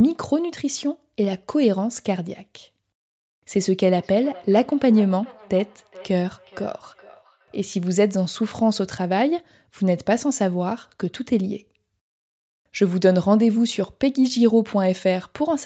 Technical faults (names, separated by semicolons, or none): feedback echo between two devices